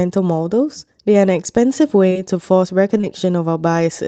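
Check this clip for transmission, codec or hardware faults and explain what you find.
There are two short concealed packet losses in this speech clip. The first runs from 2.09 to 2.17 s, the second from 2.97 to 3.05 s. Each gap is about 40 ms, which fits two consecutive 20 ms packets arriving too late for the decoder. The receiver filled each hole by extending the last sound, pitched if voiced and as shaped noise if not. It then blended back into the real audio. Each gap is heard as a brief smear or wobble, and a short consonant there can disappear. The Opus call path limits the audio to about 8 kHz.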